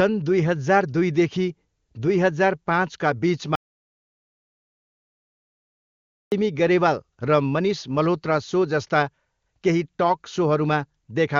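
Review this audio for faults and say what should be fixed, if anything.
Speech breaks off at 3.55 s, right after "दुईदेखि दुई हजार पाँचका", and returns at 6.32 s. This is an audio dropout to silence lasting 2.77 s. The gap is silent, with no room tone. The input signal was likely lost while the recorder kept writing empty samples. Anything said in that stretch is gone, so that passage needs re-recording. Securing the input connection and monitoring the feed during capture would prevent this.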